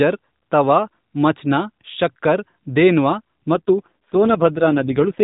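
Speech carried over an AMR narrowband mobile codec, with nothing above 4 kHz. From 3.54 s to the end at about 5.24 s there is an AMR rate drop. The voice turns buzzier and more synthetic, which fits the codec falling from 12.2 to 4.75 kbps as a weak link forces more of the bits into error protection. Unlike packet loss, there is no gap or dropout, and unlike a bandwidth switch, the band stays the same. Only the texture of the voice degrades.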